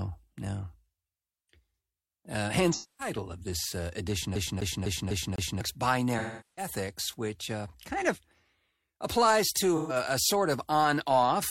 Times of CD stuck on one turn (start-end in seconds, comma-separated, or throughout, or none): 4.35-5.61